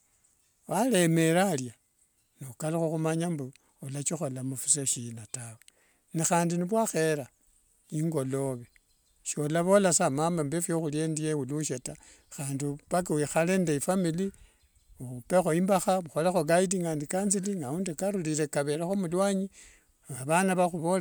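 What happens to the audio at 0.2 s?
Nothing goes wrong at 0.2 s; the speech is intact at that point, with no dropout, click or distortion.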